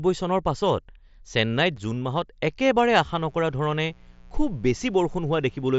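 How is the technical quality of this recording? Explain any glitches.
The recording has two faults: a brief dropout early on and a buzz that runs through the second half. Both sit on top of wideband Bluetooth headset audio, which is limited to about 8 kHz with a light graininess on louder speech.

Unconcealed Bluetooth headset packet loss occurs at 1.77 s. One voice packet between headset and phone failed to arrive, and nothing filled the gap smoothly, so the receiving side played silence or an idle pattern in its place. The result is a hole of about 7.5 ms, which fits a single lost frame, with hard edges at both ends. It is heard as a tiny abrupt hole in the speech.

Mains buzz starts at 2.90 s and lasts until the end of the clip. Sharp switching spikes from a dimmer, rectifier or missing shield, occurring twice per 60 Hz cycle, leaked into the signal path. These spikes spread into a dense series of 60 Hz harmonics reaching well into the kilohertz range. 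The buzz sits roughly 30 dB below the speech and sounds like a steady, raspy hum under the voice rather than a pure low tone.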